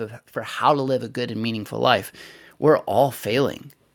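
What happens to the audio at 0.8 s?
At 0.8 s the speech is partway through an automatic gain rise that runs from 0.33 s to 3.63 s. The automatic gain control has judged the input too quiet and is raising its gain slowly, by about 9 dB over those three seconds or so. Because the gain acts on the whole signal, the voice and the background noise swell together, giving a gradual upward drift in level rather than a sudden jump.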